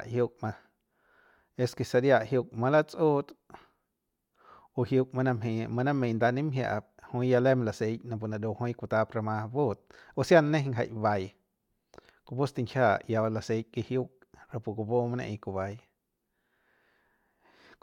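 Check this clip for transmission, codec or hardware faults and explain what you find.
The speech carries periodic USB or driver dropouts, recurring every 2.0 s from 1.73 s to 17.72 s, about ten in all. Each time, a background task stalls the USB bus or audio driver and a fraction of a millisecond of audio is skipped, so the waveform jumps abruptly. The result is a regular tick heard only over speech. On a waveform these are small discontinuities; a spectrogram shows thin, evenly spaced vertical broadband lines.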